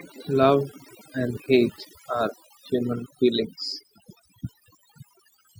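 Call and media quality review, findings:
Overdone noise removal, throughout. Background collapses to near silence with twinkling specks. Noise suppressor set too aggressive: bands near its noise estimate are pulled far down or gated off, taking low-level speech detail with them.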